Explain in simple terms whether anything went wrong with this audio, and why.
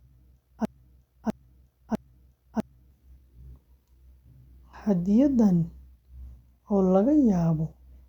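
Something did go wrong, right at the start. From 0 to about 2.91 s the speech is caught in a broken-record loop: a piece about 0.65 s long plays three times back to back, identical each time, and it is already repeating when the clip begins. This likely happened because the playback or streaming chain stalled and kept sending the last fragment it held, so whatever should have been heard during those seconds is missing.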